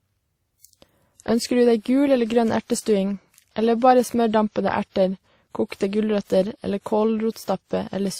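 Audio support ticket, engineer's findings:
Speech, throughout. Two sets of codec artefacts heard at once. Top end stays capped at the lowest cut-off in the chain. Transcoding between lossy codecs, likely WMA 1 followed by Opus. The second encoder wastes bits re-coding the first one's artefacts, then adds its own. The sound fits roughly 48 kbit/s, then 32 kbit/s.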